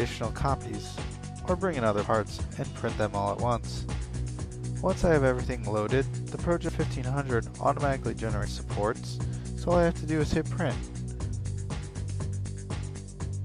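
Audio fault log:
2.04 s, 6.69 s and 8.45 s: dropped buffer (overrun). At each of these three points you hear an abrupt jump, as if the sound skips forward, with no gap of silence. Around a tenth of a second seems to be missing each time. The likely cause is that the recording software fell behind and the hardware overwrote a chunk before it was read, so the audio on either side got spliced straight together.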